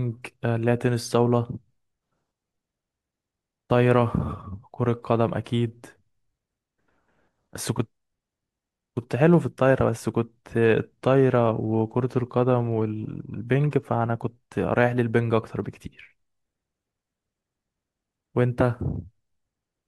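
From 0.12 s to the end at 19.87 s the speech carries a soft rattle of tiny ticks, roughly fifty a second, clearest on louder stretches. These are clock slip clicks, a single sample dropped or repeated at each slip. The likely cause is two devices running on unsynchronised clocks that differ by something like 0.1 percent, so the error reaches a whole sample about every 20 ms and produces around a thousand slips across the clip.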